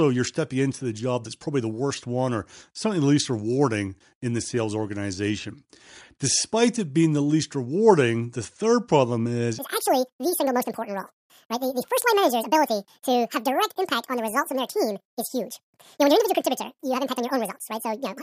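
It's a speech clip, and from 9.59 s, right after "the third problem is", everything to the end is a wrong sample rate fault. The audio suddenly runs at twice the speed and jumps a full octave, 12 semitones up, so it comes out squeaky and rushed. Speed and pitch moving together by exactly double means the samples are being played back without any rate conversion, which fits audio recorded at 22 kHz being played at 44.1 kHz.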